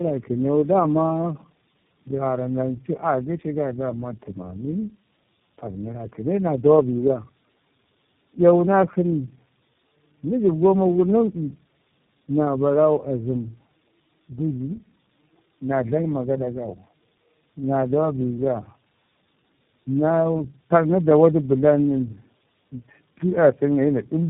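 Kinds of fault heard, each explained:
Tandem speech coding, throughout the clip: the speech sounds like it passed through several separate low-rate speech coders, each decoding and re-encoding the previous one's already damaged output, so the errors stack. The result is rough, muffled and warbly. Nothing is heard above 3.8 kHz. The sound fits three speech codecs in a row, AMR-NB, G.729A and finally iLBC, joined by G.711 A-law links.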